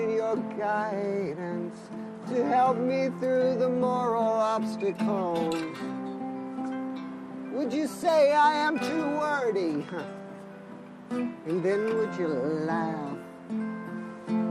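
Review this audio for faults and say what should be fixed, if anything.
Throughout, the sound is dull, with gurgling, granular distortion and upper bands flickering in and out, most likely MP2 compression at a rate fitting about 80 kbps starving sub-bands of bits.

From 13.90 to 13.94 s, a brief burst of burbling occurs: DAB burbling, where a small fraction of bit errors slipped past error correction and corrupted three MP2 frames.

To prevent both, source the material at a higher MP2 bitrate or from a non-broadcast copy, and capture DAB with stronger, more stable reception.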